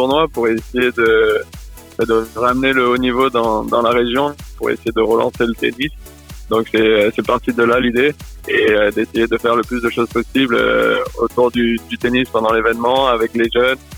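Nothing stood out on listening to the recording.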